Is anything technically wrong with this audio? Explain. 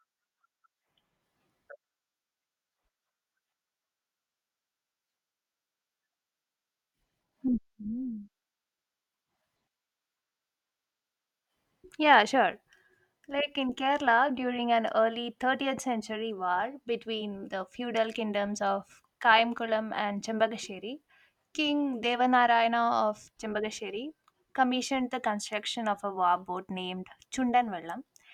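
No, nothing technically wrong can be heard in this speech recording.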